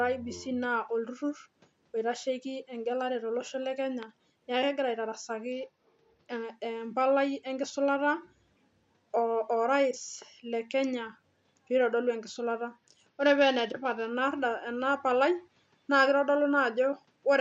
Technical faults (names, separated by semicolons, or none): Bluetooth SBC bit pool drop